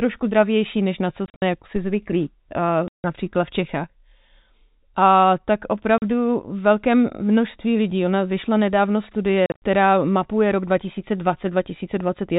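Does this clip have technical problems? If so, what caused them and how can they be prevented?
Yes. The speech has two kinds of fault.

Packet loss filled with silence occurs at 1.26 to 1.42 s, 2.88 to 3.04 s, 5.98 to 6.02 s and 9.46 to 9.62 s. The first and last stretches each lose 120 ms scattered across 160 ms, with the longest hole 60 ms. The second is a solid 160 ms gap, and the third is 40 ms. The hole lengths step in multiples of 20 ms, which fits a 20 ms packet. The receiver inserts digital silence with hard edges. Prevention: use a jitter buffer with packet loss concealment, and add forward error correction or give the stream network priority.

A phantom power thump runs from 1.76 to 2.04 s. It is a deep, low-frequency blow that dies away within about 63 ms. Switching the microphone supply on or off while the input was live sent a voltage step through the coupling capacitors into the signal path. 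Prevention: mute or turn down the channel before switching phantom power, and wait for it to settle before unmuting.

The G.711 telephone coding limits the bandwidth to below 4 kHz, and its faint quantisation noise tracks the level of the speech.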